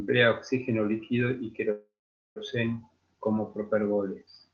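Speech clip with a call audio freeze from 1.71 to 2.39 s, after "oxígeno líquido y". The last sound trails into a fading buzz or hiss, then about 450 ms of silence. Speech resumes where it stopped, with nothing lost. Likely cause: delayed packets emptied the jitter buffer.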